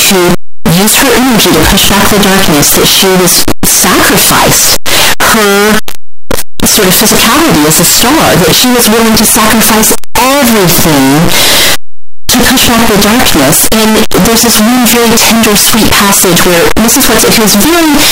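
From the first moment to the last, the speech is buried under a harsh, blaring distortion, and the soft sounds come through nearly as loud as the strong ones. That points to signed and unsigned mixed up, likely 8-bit samples read with the wrong sign convention, so the top bit flips and every zero crossing slams across the full range.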